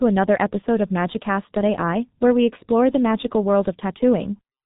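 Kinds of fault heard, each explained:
G.723.1 codec: the speech passed through a very low-rate telephony codec, apparently running around 6.3 kbit/s with long frames and a slowly updated voice model. Nothing survives above roughly 3.8 kHz, so the voice sounds heavily muffled and hoarse, and consonants smear together.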